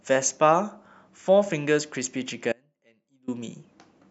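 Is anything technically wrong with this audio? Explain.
Yes, there's an audio dropout to a faint residue from about 2.53 to 3.28 s, so roughly three quarters of a second of the speech goes missing. It cuts out abruptly and snaps back just as suddenly, nothing like a natural pause or fade. In the gap you can still hear a faint trace of the sound, something like 30 dB down. That's likely the signal being lost upstream while the rest of the chain stayed live, letting a little leakage through.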